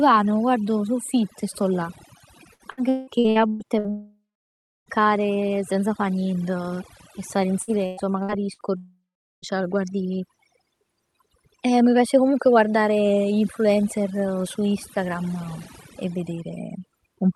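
Speech, carried over a call path whose Opus coding, which fits about 48 kbps, keeps the band up to about 12 kHz. A noise reduction stage set far too strong removes any frequency band near its noise estimate throughout, taking quiet parts of the voice with it. This overdone noise removal leaves the background near silent with twinkling specks. Repeated packet loss hits from 2.53 to 3.87 s and again from 7.62 to 8.62 s, just after "e stare in". Each hole, up to 180 ms and 112 ms respectively, is patched by stretching the last sound, so about 43% and 29% of those spans is concealed. The result is choppy speech with pieces missing. Right after each burst, from 3.90 to 4.89 s and from 8.77 to 9.45 s, the sound becomes a fading buzz or hiss and then goes silent for about 0.65 s and 0.42 s. This is likely a long network dropout, and speech resumes without the lost part.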